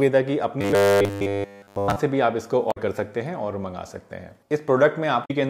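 From 0.61 to 1.96 s the player is most likely starved of new audio and keeps refilling the gap by replaying the same short slice, which points to a slice of about 10 ms. Throughout that stretch the real material is skipped, and the looping imposes a fixed buzz at 100 Hz. The sound turns rigid and metallic, a robotic sound from repeated short buffers, though its rough outline still moves along underneath the drone.

At 2.68 to 2.78 s and again at 5.21 to 5.31 s, damaged data in the compressed stream corrupts the frames there. The decoder cannot read them properly, loses its place and has to hunt for the next valid frame header before output resumes. Each of these brief spans comes through as a short glitch that breaks the flow of the audio.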